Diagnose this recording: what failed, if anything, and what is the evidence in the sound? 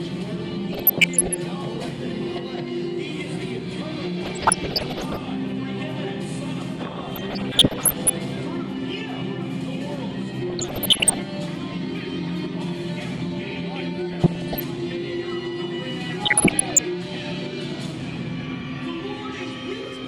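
The failure is in the DAB reception and decoding stage. Weak reception let bit errors past error correction into the MP2 audio data, giving DAB burbling at 0.73–1.36, 4.21–5.21, 7.09–8.10, 10.50–11.21, 14.11–14.60 and 16.24–16.79 s. Corrupted samples put brief noise blips into individual sub-bands. Where damaged scale factors got through, sub-bands jumped in level for up to a frame, giving watery, bubbling patches that point to an error rate of around one percent.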